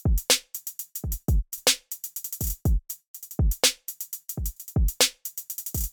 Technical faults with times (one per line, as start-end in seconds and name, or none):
1.58 damaged data in a compressed stream
4.56 damaged data in a compressed stream